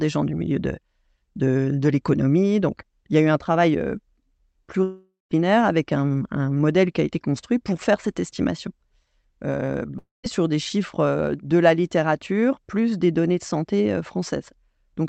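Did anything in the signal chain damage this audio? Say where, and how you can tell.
Yes. The network stage has two long network dropouts, at 4.83–5.32 s and 9.98–10.25 s. In each, the last sound smears into a fading buzz and then goes silent for about 0.19 s and 0.17 s. On a spectrogram this shows as a decaying band, then a blank gap, and the audio resumes with roughly 0.48 s and 0.26 s lost. The likely cause is packets never arriving. The call codec's 8 kHz band limit continues across both gaps.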